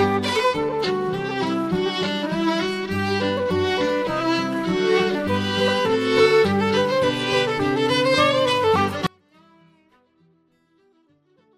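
The audio suffers an audio dropout to a faint residue from 9.07 s through to the end: the sound cuts off abruptly and only a faint trace remains, about 35 dB below its normal level. The likely cause is the signal feed being lost while the downstream path stayed live.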